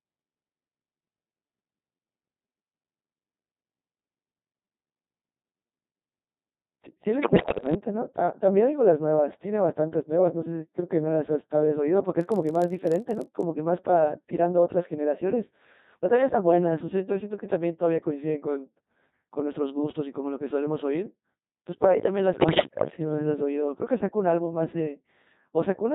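Throughout, the speech sounds robotic and buzzy, with a synthetic, sine-built quality. This is heavy Codec 2 vocoder damage at 2.4 kbit/s: only pitch, voicing, energy and spectral envelope survive, and the decoder rebuilds the voice rather than the original waveform.

From 7.22 to 7.74 s the voice lurches in pitch, level and tone colour, breaking into warbling, bleepy gibberish. These are bit errors on digital voice radio. Something like a tenth of the bits flipped, corrupting the parameters of roughly two dozen frames. The same burst returns from 22.34 to 22.92 s, at a somewhat lower error rate.

Between 12.19 and 13.45 s a steady buzz at 46.9 Hz rides on the sound, with tiny gaps chopping it at that rate. This is a block size mismatch (padded). Short blocks are zero-filled to fit what sounds like a 1024-sample read, and the resulting slowdown is negligible.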